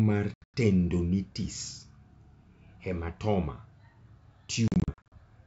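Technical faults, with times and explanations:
0.34 to 0.56 s, packet loss on an ADPCM call: about 180 ms of audio drops out across a 200 ms stretch, with the longest single hole around 100 ms, so you get a few hard-edged gaps cut into the sound. Because ADPCM codes each sample as a change from a prediction, the receiving decoder loses track of the sender's predictor and step size during the gaps. When sound resumes it comes back slightly distorted until the two ends resync.
4.68 to 5.14 s, packet loss on an ADPCM call again: this time about 240 ms goes missing, spread over 440 ms in shorter bites of up to 40 ms, which sounds like choppy, stuttering holes rather than one big dropout. Roughly ten packets are gone here, same as the first burst. Each restart catches the ADPCM decoder out of step with the sender, so the edges after the gaps carry slight distortion. The wideband G.722 link itself sounds clean, with the usual airy top end.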